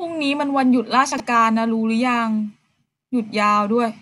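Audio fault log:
1.12 to 1.2 s, chunks out of order: a 20 ms slice of the speech turns up three chunks late, so it plays after the bits meant to follow it. Nothing's lost, but that reshuffle and its three hard joins give a brief jumble.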